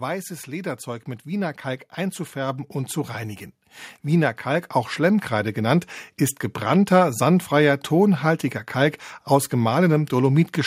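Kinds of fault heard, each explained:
Automatic gain rising: The gain control judged the input too quiet and turned it up slowly. Speech and background swell together by about 7 dB from 0.47 to 3.52 s. Then they rise by about 4 dB from 4.03 to 5.65 s, just before "ist gebrannter sandfreier tonhaltiger".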